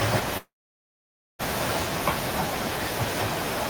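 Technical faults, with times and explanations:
0.37 to 1.42 s, long network dropout: the speech breaks into a brief fading buzz, then about 0.9 s of near silence, and resumes with roughly 1 s of material missing. This is likely a stall in packet delivery, with the receiver briefly extending the last sound before giving up.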